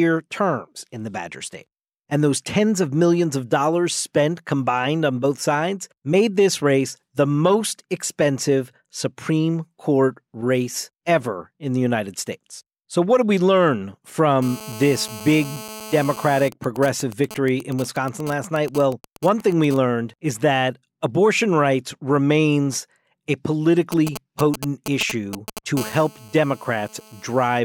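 Right after "what did we learn", at 14.42 s, a GSM phone buzz starts. It runs to 16.49 s. A 2G phone nearby is in a call and transmits in bursts about 217 times a second. The audio circuit rectifies those radio pulses. The result is a hard, raspy 217 Hz buzz full of harmonics. It sits about 16 dB below the speech and has no relation to it.

GSM signalling bursts follow at once, from 16.52 s to 19.77 s, ending just before "is that abortion rights". The phone is still in the call, but its user has gone silent. So it sends only short groups of bursts. These come through as even ticks with a longer 217 Hz buzz twice a second, roughly 15 dB under the speech. More signalling bursts arrive from 23.92 s to 25.59 s, after "abortion rights remains a". This time the phone is only signalling, not in a call. This run is louder, around 10 dB below the speech.

A steady GSM phone buzz returns at 25.77 s and lasts until 27.60 s. 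The phone is back in a call, sending its constant 217 Hz burst train. The same raspy, harmonic-rich buzz results. It is quieter this time, about 20 dB below the speech.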